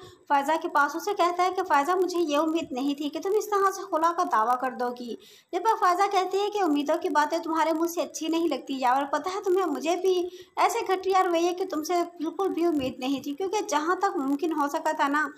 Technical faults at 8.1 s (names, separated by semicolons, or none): block size mismatch (padded)